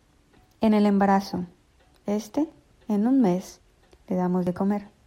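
At 2.52 s and again at 4.47 s the speech jumps forward, with roughly 30 ms cut out and the two sides butted straight together. That's audio missing between chunks, likely from a recorder working in 1-second blocks and dropping a sliver at each handover.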